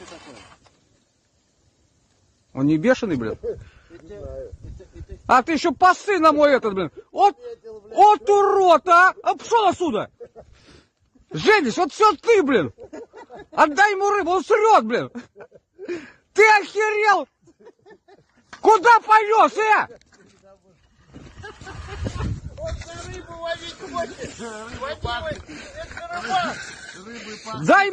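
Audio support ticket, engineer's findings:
No audible faults found on review; nothing to attribute to any component. Ticket can close without further action on the audio path.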